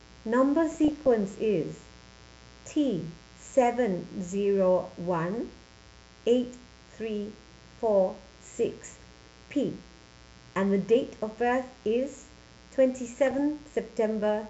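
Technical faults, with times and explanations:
throughout: mains buzz. A steady, raspy buzz sits under the speech for the whole clip, around 30 dB below it. Its fundamental is 60 Hz. The rasp comes from sharp switching spikes, as from a dimmer, a rectifier or a missing shield, entering twice per mains cycle. Those narrow spikes carry harmonics of 60 Hz far up the spectrum, into the kilohertz range. So the buzz is edgy, not a smooth hum.
0.71–1.08 s, 8.85–9.07 s and 13.27–13.39 s: DAB burbling. Three short bursts of burbling lie over the speech. Weak DAB reception let bit errors slip past the error correction into the MP2 audio data. The error rate was a small fraction of a percent. Corrupted samples put short blips of noise into single sub-bands. That gives the burbling texture. The middle burst is the densest.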